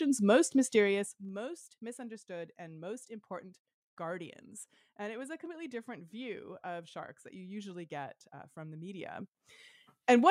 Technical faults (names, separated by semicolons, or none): zipper noise